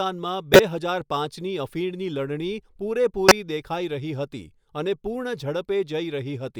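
At 0.53 to 0.60 s and again at 3.29 to 3.32 s, a corrupt frame decoded shows up. Flipped bits in a couple of compressed frames were played anyway. Energy lands at wrong frequencies. Each is a loud, sharp chirp, squeak, blip or burst of noise over the speech.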